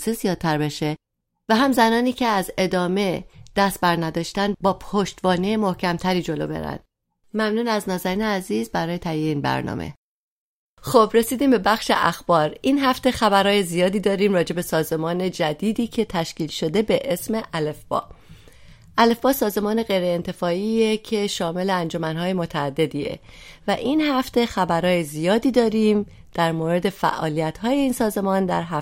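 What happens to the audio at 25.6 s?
Nothing goes wrong at 25.6 s; the speech carries on intact through that moment.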